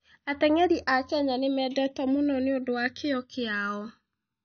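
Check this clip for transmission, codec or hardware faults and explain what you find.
Two faults run through the whole of this speech recording: the stereo channels slowly drift apart in time, and the top end is cut off and smeared in a way that points to transcoding between lossy codecs.

Channels drifting apart affects the full clip. The left and right channels appear to come from devices on separate clocks that disagree by roughly 200 ppm, so the offset between them grows steadily, reaching about 0.7 ms by the end. Summed to mono, the two copies interfere, and comb-filter notches glide slowly downward through the spectrum, heard as a slow, sweeping flange. On a spectrogram of the mono sum, this shows as a set of dark notch lines that creep downward and crowd closer together over time.

The transcoding damage is also present throughout. Nothing survives above 6.5 kHz, leaving the speech dull. 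The artefacts of the different codecs sit on top of each other, each with a slightly different character. The likely cause is a chain of codecs: the artefacts fit an MP3 encode at a low bitrate followed by a re-encode to AAC-LC at a similar rate. The second encoder spent its limited bits on the first one's noise and added its own, while the lowest cut-off in the chain remained. On a spectrogram, this shows as a hard ceiling at 6.5 kHz, with blotchy, patchy energy and scattered holes beneath it.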